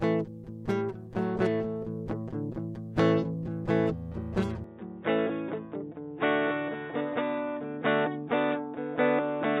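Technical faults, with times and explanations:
4.64–9.6 s, input switched to a poorer device: the music turns dull and boxy, with nothing above 3.8 kHz, likely because recording moved to a narrower-band microphone. A faint new background noise appears. A spectrogram shows the upper band cut off sharply; the waveform shows no gap or level step.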